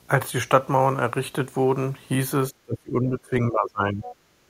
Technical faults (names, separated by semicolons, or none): speech suppressed in double talk; other side's voice leaking through; background gated by the echo canceller